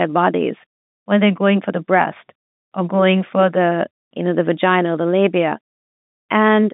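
No technical faults detected.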